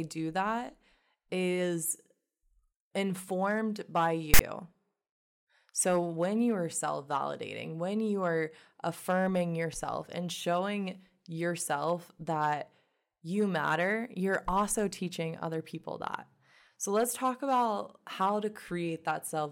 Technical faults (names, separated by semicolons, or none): file tags played as audio